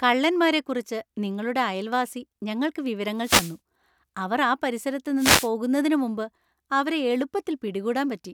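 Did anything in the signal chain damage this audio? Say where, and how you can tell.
Yes. Wireless microphone noise hits occur at 3.18–3.57 s, just after "കള്ളന്മാരെക്കുറിച്ച് നിങ്ങളുടെ അയൽവാസി ഞങ്ങൾക്ക്", and at 5.17–5.50 s, after "അവർ ആ പരിസരത്ത്". Each is a short swish of static over the speech. The analogue FM radio link faded as reflected paths cancelled, so receiver noise rose above the signal before conversion.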